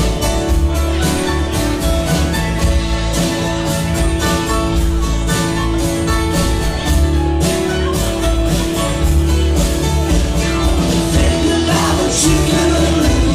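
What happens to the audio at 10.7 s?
Nothing goes wrong at 10.7 s; the audio plays through that moment intact, with no dropout, click or other fault.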